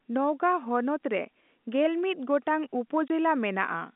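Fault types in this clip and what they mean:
Packet loss filled with silence: A packet went missing and the receiver played silence in its place. Just after "ᱱᱚᱣᱜᱟ ᱦᱚᱱᱚᱛ ᱨᱮᱜᱮᱞᱢᱤᱛ ᱜᱚᱴᱟᱝ", the speech drops out from 3.08 to 3.10 s. The 20 ms hole fits one lost packet. Its abrupt edges cut sharply into the narrow telephone-band sound.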